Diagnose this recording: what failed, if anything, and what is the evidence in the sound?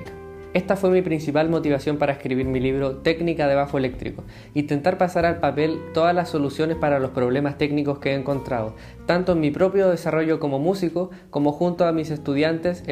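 Nothing in the signal chain fails audibly here, with no fault to point to at any stage from capture through to playback.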